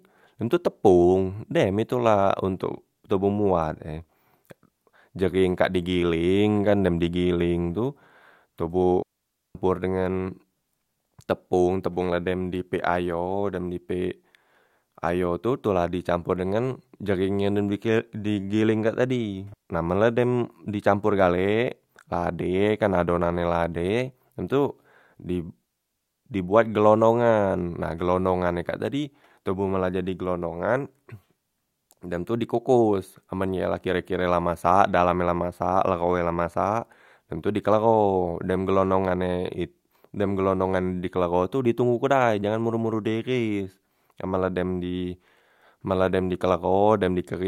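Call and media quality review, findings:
Digital wireless dropout: RF link losing data, receiver muting with a fast fade. Clean near-silent holes in speech, no noise bursts: 9.02 s (0.53 s), 19.54 s (0.16 s), 25.65 s (0.57 s).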